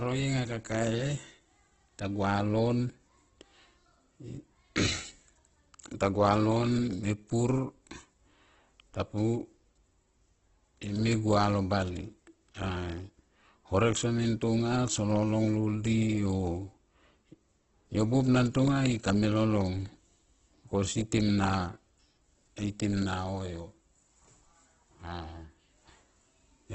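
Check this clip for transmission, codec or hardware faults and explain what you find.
There's one fault, running through the whole clip: Opus compression, likely at a low bitrate around 12 kbps. The speech sounds heavily grainy and rough, with nothing above 8.1 kHz, because starved bands get filled with noise.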